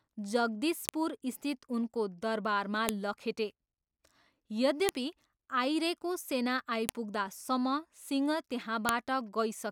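A speech clip broken by sharp, loud clicks at 0.89, 2.89, 4.89, 6.89 and 8.89 seconds. Each is a brief snap that lands exactly 2 seconds after the last, regardless of what the speech is doing. This is a file header played as audio: the stream was assembled from 2-second WAV pieces whose headers were left in, so each piece's few dozen header bytes are decoded as sample values, producing an abrupt spike at every join.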